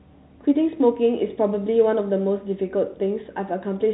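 No technical faults can be heard in this speech. The G.711 telephone coding is doing its ordinary job, so nothing above about 3.9 kHz comes through and any coding noise is faint at most.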